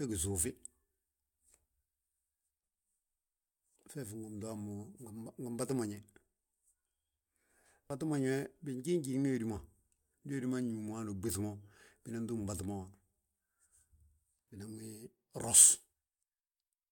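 No technical faults can be heard anywhere in this speech recording. There is no event to place on the timeline.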